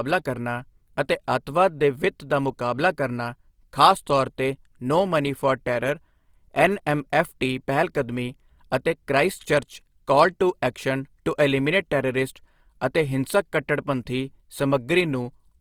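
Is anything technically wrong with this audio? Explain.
Yes. Throughout, the speech has plainly audible Opus compression damage, likely from its CELT music mode at something like 24 kbps. Band filling leaves it rough and grainy, not swirly like MP3, with content reaching about 20.2 kHz.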